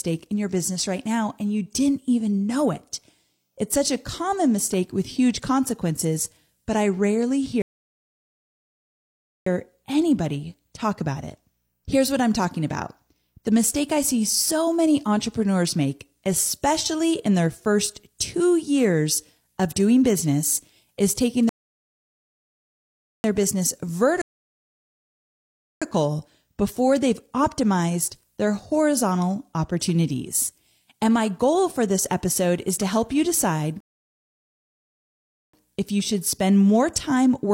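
The speech stops dead four times, at 7.62, 21.49, 24.22 and 33.80 s, with silences of about 1.8, 1.7, 1.6 and 1.7 s. Each is a rebuffering stall: the player ran dry of downloaded audio and just sat there until more showed up. You can tell because it picks up exactly where it left off, so nothing's missing, but the clip gets padded out by roughly seven seconds of dead air.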